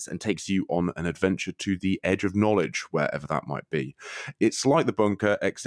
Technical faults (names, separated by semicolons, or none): wrong sample rate